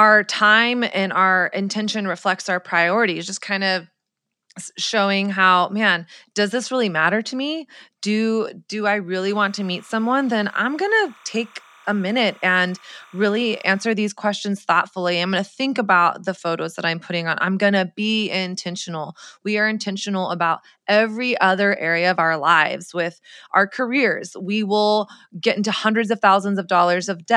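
Speech clip with timecode bleed from 9.27 to 13.91 s, between "me do do i" and "these questions thoughtfully I'm". A chirpy warble flips between roughly 1 and 2 kHz, around 30 dB under the voice, which fits 29.97 fps linear timecode leaking in from a neighbouring track or cable.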